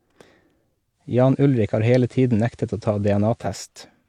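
At 0.92 s the speech blends from digital to analogue FM over about 0.3 s, as the receiver loses the digital stream. Hiss rises to roughly 40 dB below the signal, and level shifts about 1 dB until the return at 3.59 s.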